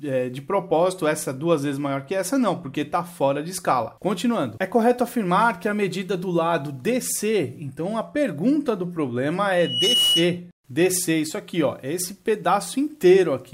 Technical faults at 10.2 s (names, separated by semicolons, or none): loudspeaker feedback squeal